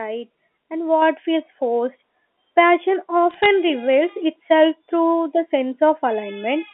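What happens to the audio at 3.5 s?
Bit errors on a digital phone line hit from 3.31 to 3.46 s: roughly one bit in three hundred flips, each corrupting a single sample, with hits on high bits making sharp ticks, giving brief crackle over the speech.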